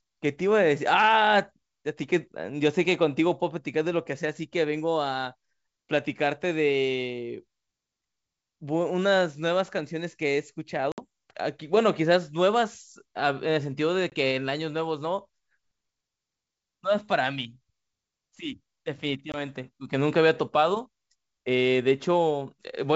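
Hard-edged silent holes cut the speech at 10.92 to 11.01 s (60 ms lost, about three packets), 14.10 to 14.13 s and 19.32 to 19.35 s (20 ms each, a single packet), with the speech returning slightly distorted before it settles. This is packet loss on an ADPCM call: the decoder's predictor and step size drift from the sender's until they resettle.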